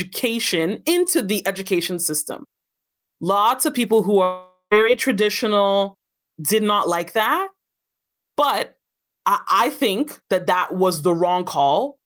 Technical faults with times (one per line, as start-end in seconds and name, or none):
4.23-4.73 long network dropout